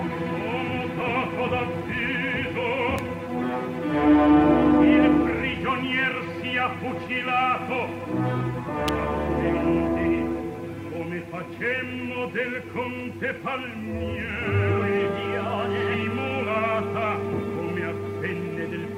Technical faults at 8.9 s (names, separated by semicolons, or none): electrical switching spike